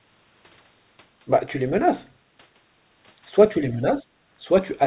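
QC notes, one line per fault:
3.61–4.12 s, speech suppressed in double talk: the echo canceller most likely mistook the near talker for loudspeaker echo while both sides spoke at once, so it pulled the level down. The speech dips by as much as about 20 dB, with roughly a third of a second of the half-second span affected, heard against a band that stops at 4 kHz, which fits a narrowband G.711 call path.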